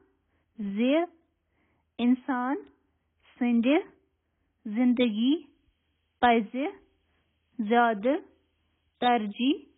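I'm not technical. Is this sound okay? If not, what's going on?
No. The whole recording sounds dull and muffled, with nothing above about 3.8 kHz. That points, likely, to AAC compression squeezed very hard. The coder throws away the high end and much fine detail, so the speech loses its crispness throughout.

From 5.42 s to the end, there is also low bit depth with noise shaping. The sound is stored with too few steps, which fits roughly seven bits. The rounding errors are pushed upward, giving a steady, thin hiss that is fairly loud against the speech.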